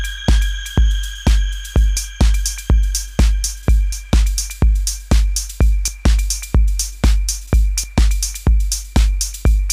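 At 1.97, 3.92, 5.88 and 7.84 s the sound jumps forward abruptly, with no gap of silence where the material on either side meets. The skips recur about every 2 s, each removing a few tens of milliseconds. The regular spacing points to audio missing between chunks: the recording or processing chain likely handles the signal in blocks of about 2 s and drops a short slice each time it closes one block and starts the next.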